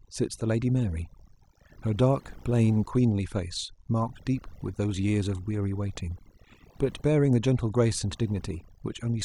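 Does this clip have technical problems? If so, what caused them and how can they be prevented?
Yes. Mains buzz runs throughout the clip: a steady, raspy buzz built on 50 Hz, sitting roughly 35 dB under the speech. The rasp comes from sharp switching spikes, twice per mains cycle, leaking in from a dimmer, a rectifier or an unshielded cable, so the hum carries a long ladder of harmonics that stretches up into the kHz range instead of staying a soft low tone. To prevent it, keep audio cables and gear away from dimmers and power supplies, use balanced, properly shielded connections, and fix grounding before recording.

Overdone noise removal is also present across the whole clip. A noise reduction stage was pushed too hard, so any frequency band that came close to its idea of the noise was pulled down or switched off. Quiet parts of the speech were removed along with the noise, leaving a lowered background that breaks up into twinkling, warbling specks. 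To prevent it, reduce noise at the source and apply gentle reduction settings, checking by ear for these warbling artefacts.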